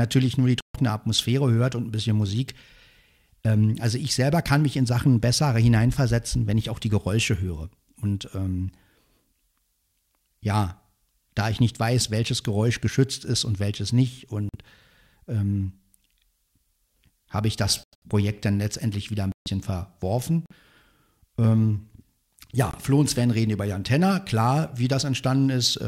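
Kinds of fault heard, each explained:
Corrupt frame muted: the speech cuts abruptly to dead silence at 0.61, 14.49, 17.84, 19.32, 20.46 and 22.71 s, each hole lasting 0.06 to 0.2 s, and timing stays intact. Damaged compressed frames were rejected by the decoder and replaced with silence.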